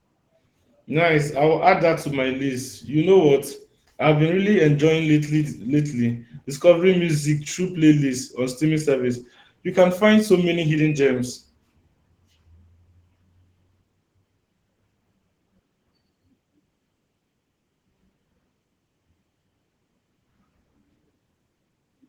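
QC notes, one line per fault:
Throughout, Opus voice compression: speech sounds hoarse and faintly robotic; this coarse excitation coding fits hybrid Opus near 16 kbps.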